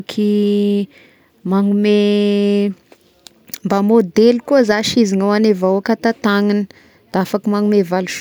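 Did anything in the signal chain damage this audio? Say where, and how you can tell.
No, no signal-chain damage heard.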